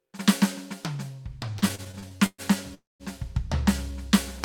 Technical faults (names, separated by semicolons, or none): repeated stalls (stutter); call audio freeze